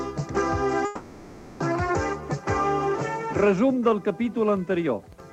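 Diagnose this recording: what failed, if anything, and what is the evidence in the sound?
The failure sits in the network path, most likely packets held up in transit long enough for the receiver's jitter buffer to run dry, giving a call audio freeze. From 0.85 to 1.62 s the last sound is stretched into a fading buzz or hiss rather than dropping out. About 750 ms of fill is inserted, and when the packets arrive the audio resumes exactly where it stopped. Nothing is lost, but everything after the freeze plays 750 ms later.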